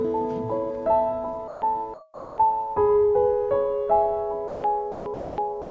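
Sound dropped by the voice detector at 1.48–1.62, 1.94–2.38, 4.48–4.64, 4.92–5.06, 5.14–5.38 and 5.62 s to the end: the music gives way to steady comfort noise for 0.09 to 0.44 s, likely because the sender's detector mistook it for background. Through the call path, nothing is heard above 8 kHz.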